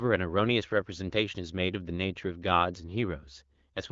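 No technical faults can be heard anywhere in this speech.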